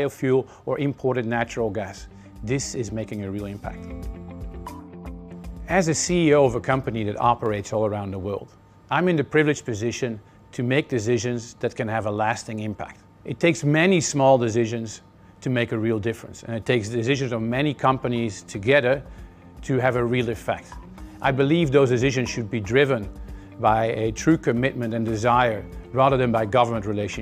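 Two sharp single clicks occur, at 7.46 s and 24.52 s. Each is likely dropped samples, a handful missing, so the waveform jumps abruptly.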